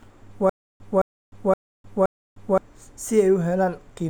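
From 0.50 to 2.58 s the speech shows stutter with silent gaps: a 215 ms fragment repeats four times, each followed by 305 ms of dead silence, likely a stalled stream retrying.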